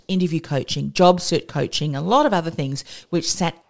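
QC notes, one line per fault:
3.62–3.70 s, comfort noise in place of the background: right at the tail, the last 80 ms of real room tone drops out and a flat, featureless hiss takes over, about 14 dB quieter than the background it replaces, which was already sitting about 41 dB under the loud speech. Likely cause is the sender's voice detector calling silence and halting transmission, with the receiver synthesising filler noise. The filler, like the rest of the call audio, stops around 8 kHz.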